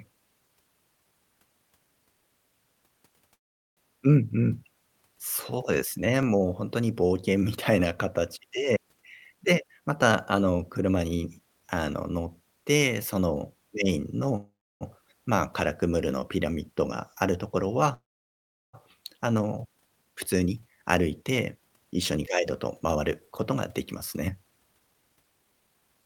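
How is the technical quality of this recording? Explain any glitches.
The recording has three recurring kinds of glitch: dropouts, regular stutters at joins, and stretches where the speech runs fast.

Call audio freeze at 3.34–3.79 s, 14.36–14.83 s and 17.94–18.75 s. Packets were likely delayed and the buffer ran dry. A brief fading tail gives way to silence lasting about 0.41, 0.30 and 0.72 s. Speech then resumes where it stopped, with nothing lost.

Overlapping chunks at 6.23, 10.24, 14.24 and 22.26 s. The audio was handled in 4 s chunks, each starting 7 ms early. That repeated sliver sounds like a small click or stutter.

Jitter buffer speed-up from 8.99 to 11.61 s, at 116% speed. It runs again from 20.05 s to the end, at 108%. The receiver trimmed tiny pitch-period pieces to cut excess delay, about 0.4 s in the first stretch. The pitch stays the same, but the speech sounds hurried.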